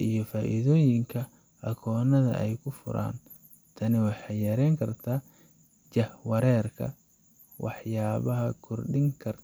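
No technical faults are audible.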